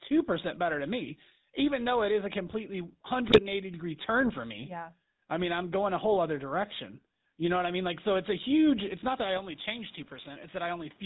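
Speech runs throughout with a squashed, breathing quality, with the level swinging around 5 dB. That is gain pumping, likely from the input gain being set far too high and a fast limiter hauling it back down on every peak. Over the whole clip the voice also has a buzzy, gravelly roughness, and the top end stops short of 4 kHz. This is the GSM full-rate codec, whose damage is plainly audible here and fits its 13 kbps rate. The codec rebuilds the voice from a vocal-tract model driven by a coarse, regularly spaced pulse excitation. Between 3.28 and 3.40 s, just after "it is a completely" and before "degree turn for me", the voice breaks into a short gargling squawk. These are GSM bit errors: corrupted bits reached the decoder and scrambled the filter, pitch and gain values for a handful of frames. From 9.37 s to the end, straight after "it's not that I", the sound turns duller with no gap at the change. 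It drops about 5 dB, loses everything above 3.8 kHz and picks up a new noise floor roughly 30 dB below the voice, so the input was likely switched to a poorer device.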